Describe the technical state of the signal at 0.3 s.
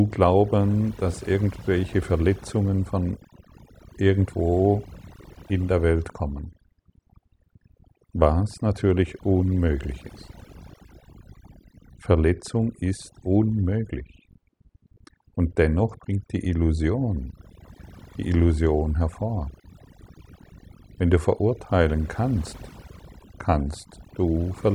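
At 0.3 s the speech carries overdone noise removal, which runs through the whole clip. The noise reduction is set too strong, so bands near the noise estimate are pulled down or off, leaving near-silent gaps with twinkling specks. A spectrogram shows scattered isolated blips between harmonics.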